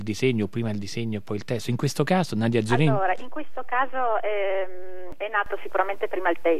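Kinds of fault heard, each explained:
DC step: at 2.70 s the waveform's zero line jumps to a constant offset of about -30 dBFS and holds until it steps back at 5.12 s. Each jump sounds as a low thump, while the sound itself continues unchanged.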